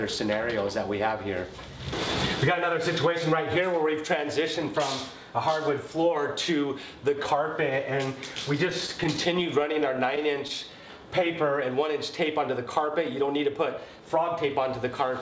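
From 8.70 to 10.51 s there are scattered short gaps. Packets went missing or arrived late, one at a time. There are about ten holes, none longer than around 15 ms. The receiver filled each by carrying the previous sound forward. Together that patching covers about a tenth of a second, a small share of the stretch. The sound stays clear but picks up brief ticks, small smears and quick hiccups.

From 10.64 to 11.52 s comes a jitter buffer slow-down. The buffer had run low and needed a reserve. So the receiver repeated single pitch periods and slivers of pauses, again and again. This added 63 ms. Playback drops to 94% speed while the pitch holds steady. Sounds feel drawn out.

From 13.55 to 14.19 s there is a jitter buffer speed-up. Now the buffer held more than its target. The receiver trimmed short pieces, one or a few pitch periods each, many times in a row. About 50 ms was cut. Playback runs at 108% speed with the pitch unchanged, so this short passage sounds hurried. 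Throughout, the call codec leaves nothing above 8 kHz, which fits G.722.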